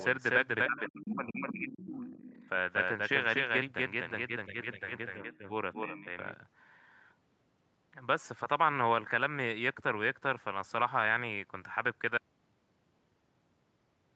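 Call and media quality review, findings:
Speech suppressed in double talk: speech dips up to about 25 dB over roughly 1.5 s, 0.69–2.05 s, and by about 10 dB at 5.75–6.06 s. Likely echo canceller attenuating both talkers during overlap.

Other side's voice leaking through: second voice at 0.77–0.89 s, about 25 dB down, and 1.81–2.49 s, about 15 dB down. Likely residual loudspeaker echo the canceller missed.

Audio dropout to silence: sound cuts to silence, no room tone, from 12.18 s to the end. Likely lost input while the recorder kept writing silence.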